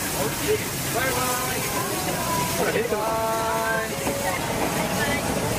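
Compressed frames skipped at 1.6 s, 3.02 s and 4.37 s: blocks of 23.2 ms frames never reached playback, so the audio jumps ahead roughly 0.4 s, 0.2 s and 0.1 s.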